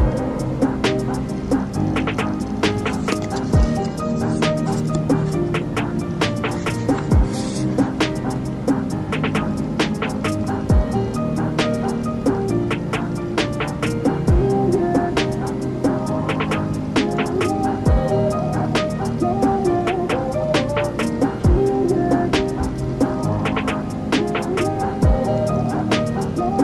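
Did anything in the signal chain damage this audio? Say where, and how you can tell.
No, nothing in the signal chain can be heard damaging this audio. No stage leaves a mark anywhere in the clip.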